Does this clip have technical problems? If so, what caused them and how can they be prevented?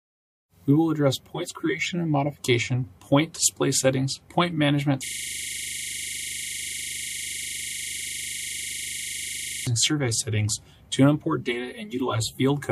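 Yes. From 5.06 to 9.67 s the computer or its audio driver froze while the sound hardware kept cycling through its ring buffer. The result is a system hang loop: one 40 ms slice of sound repeats about 115 times, heard as a rapid stutter at 25 Hz. To prevent it, fix whatever stalls the system or driver, and add a watchdog that mutes the output when the buffer stops being refilled.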